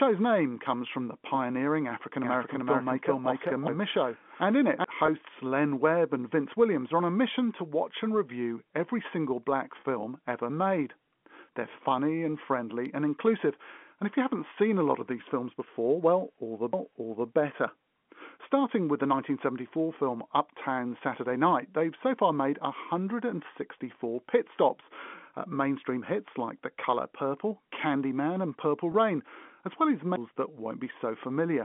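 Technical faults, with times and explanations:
2.24–4.84 s, doubled audio track: A second copy of the speech runs about 0.4 s behind the first, at roughly the same loudness, likely because the signal was picked up again through a slower path or an edit left two copies out of step. The late copy is full-band, with no decay or room colour, so it sounds like a dry, overlapping double of the talker. It cuts in and out abruptly at the edges of the span.
5.06–5.08 s, 9.80–9.84 s and 28.92–28.94 s, packet loss with pitch repetition: Audio went missing in transit for about 20 ms, 40 ms and 20 ms. Each gap fits one or two lost 20 ms packets. The receiver filled each hole by repeating the last pitch period and fading it down. This gives a brief held, slightly buzzy tone where the speech should move on. The 40 ms gap at 9.8 s is the longest.
16.73 s, CD skip: The playback jumped to another point in the audio, as happens when a knock or a disc flaw throws the laser onto a different turn of the spiral. 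The player muted for only a few milliseconds before carrying on from the new position. This is heard as a small tick and an abrupt break in the continuity of the speech.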